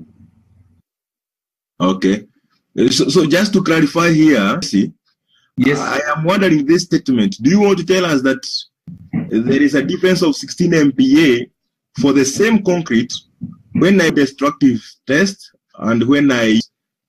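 Three brief chirps or blips break into the sound at 4.62 s, 14.10 s and 16.60 s, each over almost instantly. These are damaged data in a compressed stream: at each point some bytes of the encoded file were lost, zeroed or overwritten, so the decoder misread or rejected the affected frame, lost sync, and had to hunt for the next valid frame header before normal playback resumed.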